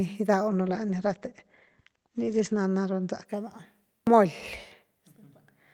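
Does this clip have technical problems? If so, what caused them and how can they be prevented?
Yes. A call bitrate drop from 0.48 to 3.31 s starved the encoder of bits, consistent with a fall to about 13 kbps. The speech turns rough and muffled, with nothing above 8 kHz. Keeping the network path stable and setting a higher minimum encoder bitrate would prevent it.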